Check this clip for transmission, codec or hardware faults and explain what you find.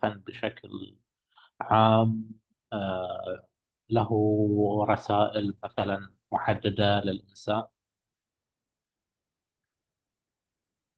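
One fault stands out in this speech. From 5.36 to 8.31 s the sound turns rough and watery and loses its upper brightness. It is worst for about 1.4 s, then clears. This is a call bitrate drop. The Opus encoder appears to have been throttled from roughly 32 kbps to around 13 kbps, so it coded the speech more coarsely and trimmed the high frequencies until its bit budget returned.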